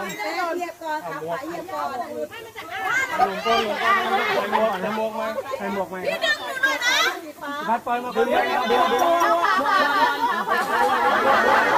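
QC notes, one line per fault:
8.70 s to end, doubled audio track: from 8.70 s a second full-band copy of the sound runs about 200 ms behind the original at roughly equal loudness, so every onset is answered by a clean repeat with no decay or room colour, and the copy switches in abruptly rather than fading up. The cause is likely the same signal being captured again through a slower path, or an edit leaving two copies out of step.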